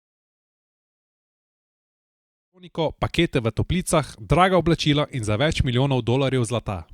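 Speech, with no technical faults to report.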